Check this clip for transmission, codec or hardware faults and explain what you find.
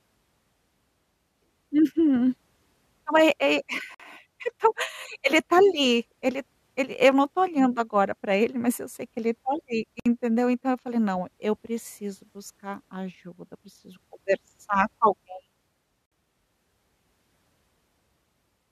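The speech has a single recurring fault: gaps at a join of encoded pieces. Short dropouts with smeared edges, about 51 ms at 3.94 s just before "então ele tá ali", then about 60 ms at 10.00 s right after "que ele tá ali" and again at 16.06 s, recurring every 6 s. Speech resumes where it stopped. Separately encoded six-second pieces were joined untrimmed, leaving the encoder's leading delay and final-frame padding as silence.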